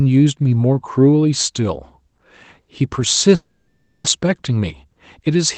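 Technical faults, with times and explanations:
3.35 to 4.08 s, long network dropout: the speech stops and the last sound is drawn out as a fading buzz for a few tenths of a second, then about 0.28 s of silence follows before the audio resumes with roughly 0.6 s of the original simply gone. Unlike a short packet-loss glitch, the concealment gives up and goes quiet, and the talker jumps forward rather than picking up where they left off. Late-arriving audio after a delay jump of around a tenth of a second is the likely cause.
4.21 to 5.36 s, jitter buffer speed-up: right after the dropout the buffer holds more audio than it needs, so the receiver trims tiny pitch-period slices again and again, removing somewhere near 70 ms in total. The speech plays about 6% faster and sounds slightly rushed, yet the pitch stays the same. That steady pitch, together with the absence of clicks or gaps, separates it from a resampling error or a dropout. 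Throughout, the Opus call path at 20 kbps limits the audio to about 8 kHz.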